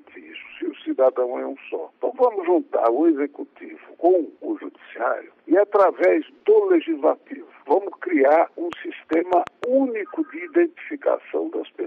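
From 8.73 to 9.65 s a train of clicks ticks over the sound, about five sharp pops at roughly 4.4 per second, unevenly spaced and peaking around 10 dB above the signal. Likely interference or a struggling interface; the waveform shows thin repeated spikes, the spectrogram narrow vertical broadband lines.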